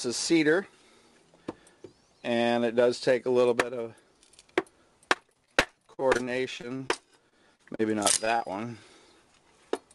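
From 5.13 to 6.91 s, and again from 7.29 to 8.42 s, the audio breaks into repeated packet loss (robotic sound). Audio keeps going missing in short bursts, none longer than about 40 ms, and each hole is filled by stretching the sound just before it. In the first stretch roughly 0.3 s is patched and 0.2 s lost outright. The result is choppy, with pieces missing, and unlike a single dropout or a clean mute, the gaps come in quick succession.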